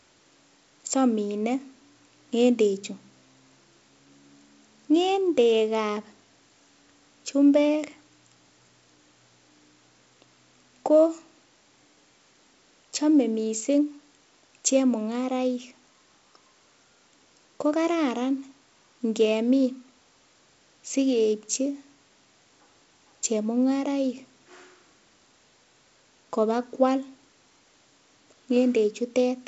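No faults to report; the speech arrives over a G.722 wideband telephone path, with nothing above about 7.7 kHz, a light hiss in the upper band and a slightly noisier lower band that fits the 56 kbit/s mode.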